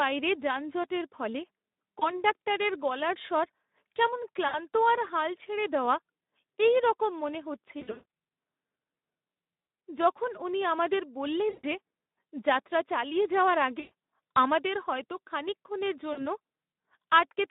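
Speex codec damage runs through this whole speech recording. The audio is confined to a narrow telephone band of about 200 Hz to 3.7 kHz, and the low-rate CELP coding leaves it hoarse, grainy and noisy, with plainly audible damage that fits a setting of around 11 kbps, where too few bits are left to model the excitation cleanly. VoIP packet loss concealed by the speech codec appears at 1.99–2.19 s, 4.48–4.59 s, 7.79–8.03 s, 9.61–9.81 s, 11.49–11.65 s, 13.79–13.90 s and 16.13–16.24 s. The gaps range from a 20 ms dropout to 220 ms of loss scattered over about 320 ms, whose longest unbroken stretch is 140 ms. In each gap the decoder keeps extending the last pitch and spectral shape at falling gain, so the sound smears into a fading buzzy tone or coloured noise and stays weak for a short while after the stream resumes.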